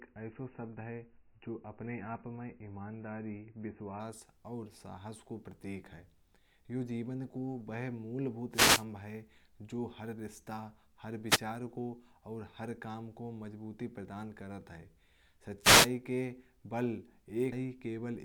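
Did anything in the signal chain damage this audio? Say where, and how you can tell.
Yes. An adaptive stream starting at a low bitrate affects the opening, from 0.0 to 4.0 s. This is a network and codec stage fault. Nothing above 3 kHz survives, and compression artefacts are stronger, which points to an MP3 rendition of roughly 18 kbit/s. At 4.0 s the treble returns abruptly with no gap, consistent with the player switching to a rendition near 128 kbit/s once it had measured the connection.

A wireless microphone noise hit occurs three times: 8.51 to 8.85 s, 11.27 to 11.42 s (just after "हर रिश्ते हर"), and 15.61 to 15.90 s. This damage happens in the analogue radio link, before conversion. Each event is a brief swish of static rising over the speech and then clearing. Reflections briefly cancel the FM signal, and receiver noise surges in while it fades.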